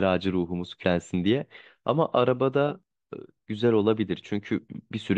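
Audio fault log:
0.83 s: damaged data in a compressed stream. Corrupt bytes make the decoder misread the frame and resynchronise, producing a brief blip in the speech.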